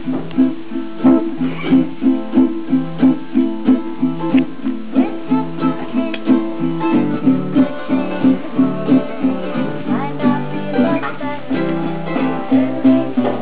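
Nothing in this recording calls for attention; it sounds just as it should the whole way along.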